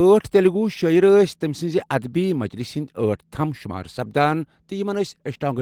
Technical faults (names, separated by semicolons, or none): none